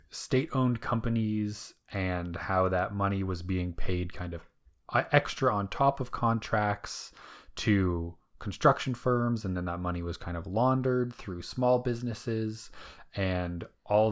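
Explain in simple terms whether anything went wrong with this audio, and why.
Listening through this speech recording, nothing stood out as having gone wrong with the sound.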